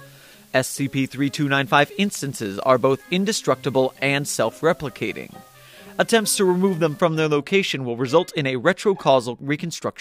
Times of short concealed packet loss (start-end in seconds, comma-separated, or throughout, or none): none